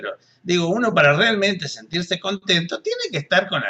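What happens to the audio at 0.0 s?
Nothing goes wrong at 0.0 s; the audio starts cleanly and is intact at that moment.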